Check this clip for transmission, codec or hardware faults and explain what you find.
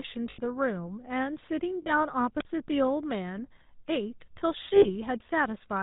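Two faults turn up in this speech clip: a codec running through the whole thing, plus a few brief dropouts.

The GSM full-rate codec is present throughout and plainly audible. It models the vocal tract and feeds it a thinned-out pulse excitation, with nothing passing above 4 kHz. The result is that buzzy, gravelly roughness, which fits the 13 kbps full-rate coder.

There are lost GSM frames at 0.30 to 0.40 s (80 ms), 1.82 to 1.90 s (40 ms) and 4.76 to 4.86 s (60 ms). In each gap the decoder keeps reusing the last good frame's settings, so you hear a short, rough, metallic ring.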